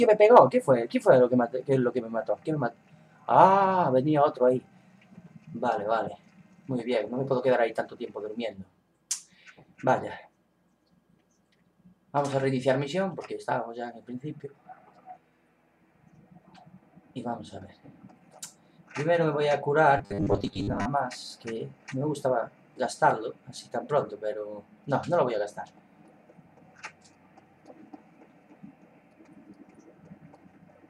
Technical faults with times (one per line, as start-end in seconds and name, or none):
19.98-20.87 robotic sound from repeated short buffers